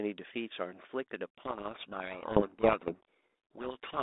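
For the first 1.38 s the speech comes through a narrow telephone band, roughly 250 Hz to 3.7 kHz, with the light coding grain of G.726 ADPCM, which fits 32 kbit/s. At 1.38 s a codec payload misread begins and runs to 4.02 s. The two ends disagree on the bit order of each G.726 code word. The decoder then reads wrong difference values every sample. The speech sinks under harsh, rasping distortion until the end.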